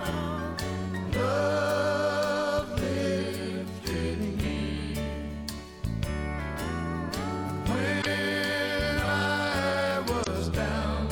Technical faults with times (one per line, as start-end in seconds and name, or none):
7.98-8.06 damaged data in a compressed stream
10.20-10.27 damaged data in a compressed stream